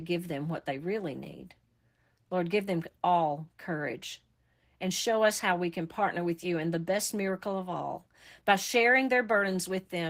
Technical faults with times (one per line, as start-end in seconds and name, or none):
0.00-10.09 Opus voice compression